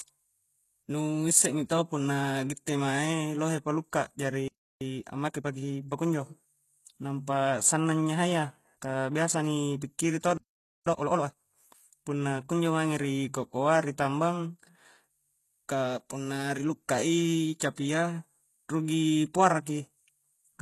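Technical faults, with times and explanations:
Throughout, HE-AAC compression: the speech is band-limited with nothing above about 12.3 kHz, and the upper range sounds synthetic, with gritty, lispy sibilants. It is likely heavy low-bitrate coding, around 16 kbps, rebuilding treble from copied lower bands so harmonics misalign.
4.48 to 4.81 s, playback stall: the speech cuts to silence for about 0.33 s mid-flow. The player likely ran out of buffered data or was blocked, so output halted until it recovered.
4.81 to 6.11 s, time-compressed catch-up: the speech runs hurried at 1.25 times normal speed, pitch unchanged. Small pieces are cut out and cross-faded to drain the backlog left by the stall.
10.38 to 10.86 s, playback stall: right after "ka biasa ni pikkiri" the sound drops out for about 0.49 s before continuing. As before, the player was likely starved of data or blocked and produced nothing until recovering.
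10.86 to 11.34 s, time-compressed catch-up: following the gap after "ka biasa ni pikkiri", speech rushes at double speed without a pitch change, as fragments are dropped and cross-faded to catch up quickly.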